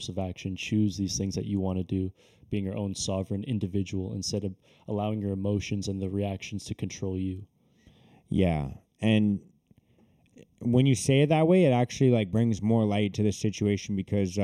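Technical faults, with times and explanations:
Throughout, channel delay (comb filtering): one channel lags by roughly 0.3 ms. Summed to mono, the speech sounds hollow, with evenly spaced notches from about 1.5 kHz.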